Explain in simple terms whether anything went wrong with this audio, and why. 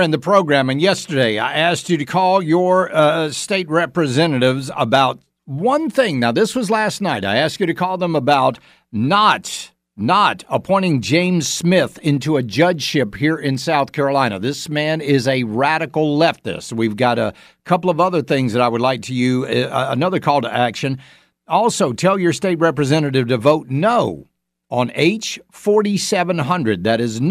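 Nothing went wrong with this speech recording. No technical faults turn up anywhere in it.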